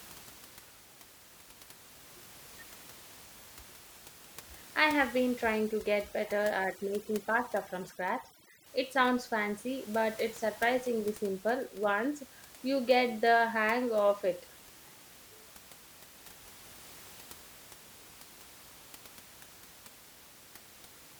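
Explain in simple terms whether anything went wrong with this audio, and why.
From 5.58 to 8.66 s, right after "I have been", overdone noise removal leaves a lowered background with twinkling specks, unlike simple muffling.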